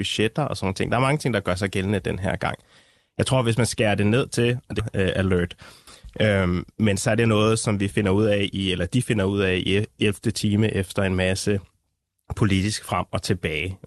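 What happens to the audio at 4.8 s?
At 4.79 to 4.81 s the speech hits a skip ahead: roughly a second of audio was thrown away, probably by an overflowing jitter buffer, so playback jumps straight forward with no gap, and the two sides are stitched almost directly together.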